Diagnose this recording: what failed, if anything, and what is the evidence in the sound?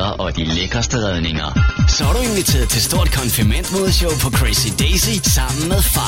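The failure is at the playback stage: the player began on a low-bitrate rendition of an adaptive stream and switched up once it had measured the connection. From 0.0 to 2.0 s nothing is present above about 6.9 kHz, and codec artefacts are heavier, which fits a low-rate AAC encode near 24 kbit/s. At 2.0 s the full treble returns abruptly, with no gap, consistent with a step up to roughly 96 kbit/s.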